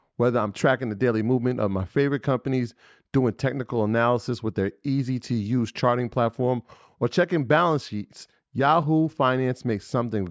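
Nothing here stands out as a fault: the speech just has the usual call microphone processing on it, with the lowest bass trimmed away and nothing above about 8 kHz, which is what you'd expect from that path.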